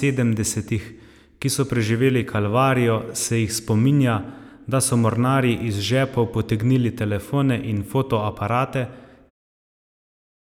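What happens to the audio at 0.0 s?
Nothing goes wrong at 0.0 s: the audio is intact at the opening, with no damage.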